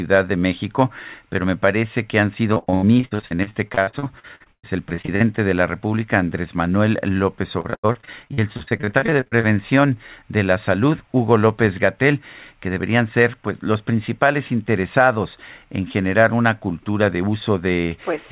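From 2.54 to 5.22 s, and again from 7.60 to 9.45 s, repeated packet loss gives the speech a choppy, robotic sound. Lost packets are patched by stretching the last sound, covering about a third of each stretch. The longest gaps run 118 ms and 92 ms. The narrow call path, with nothing above 4 kHz, fits a G.711 codec.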